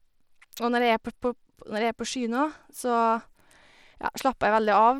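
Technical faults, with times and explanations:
Throughout, Bluetooth SBC compression: the speech has flickering, missing treble and gritty noise, likely from a starved SBC bit pool consistent with roughly 96 kbps. Spectrograms show patchy upper bands.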